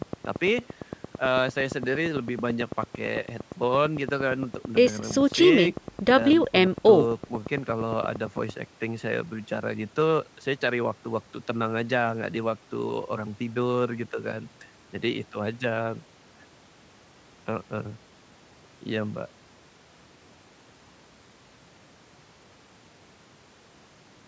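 Likely interference from nearby equipment or a faulty connection or power supply injects a train of clicks from 0.02 to 8.50 s. Near-identical pulses arrive at a steady 8.85 per second, some 70 in all, at about 15 dB above the speech, ticking through the pauses too.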